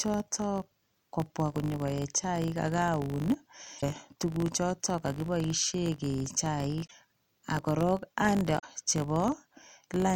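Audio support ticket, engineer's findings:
Filter restarted on every block, throughout: steady 50 Hz tick/buzz riding on the speech and tracking its level. Block-processing filter losing state, each 20 ms block starting from silence. Spectrogram: comb of lines at 50 Hz multiples; waveform: small transient at each block boundary.

Damaged data in a compressed stream at 3.78–3.83 s, 6.83–6.92 s and 8.56–8.64 s: short glitches. Decoder hitting corrupt frames, losing sync, resyncing on next header. Spectrogram: brief broadband smear; waveform: abrupt discontinuity.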